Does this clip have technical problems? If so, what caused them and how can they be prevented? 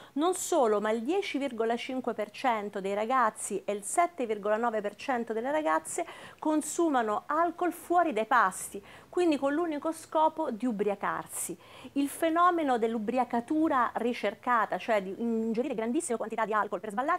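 Yes. A time-stretched section runs from 15.51 s to the end at 17.19 s, where the pace abruptly jumps to about 1.77 times normal speed while the pitch stays the same, so the audio turns rushed. This was likely caused by software squeezing that stretch to fit a shorter length, dropping short pieces to hold the pitch steady. To prevent it, trim or edit the material to length instead of compressing its timing, or apply gentler stretching across a longer span.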